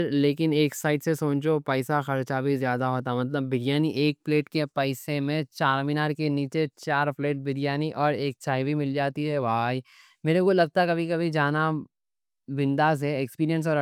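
No technical faults are audible.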